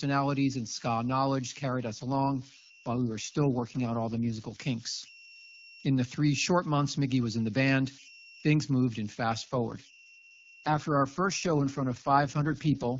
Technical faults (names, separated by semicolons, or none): converter idle tones; AMR rate drop